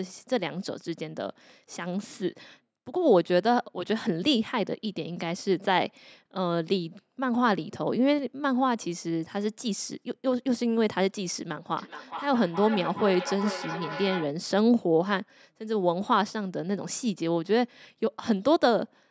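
Speech, with feedback echo between two devices from 11.78 to 14.34 s: the sound returns about every 400 ms, peaking about 11 dB below the direct speech. Two devices in the same room are on one call, and one replays what the other's microphone sent. That microphone picks it up again, and neither echo canceller removes sound played by the other device. On a waveform, each burst is followed by smaller copies at regular spacing. On a spectrogram, each syllable's harmonics reappear as fainter, evenly spaced ghosts shifted along the time axis. The call's microphone processing leaves nothing above 8 kHz, so the spectrogram is empty over that line throughout.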